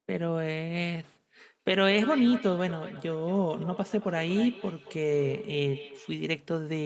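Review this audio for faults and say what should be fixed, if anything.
Feedback echo between two devices runs from 1.72 to 6.29 s. Speech returns about every 200 ms, peaking about 13 dB below the speech, as one device replays another's microphone. Mute all but one device per room.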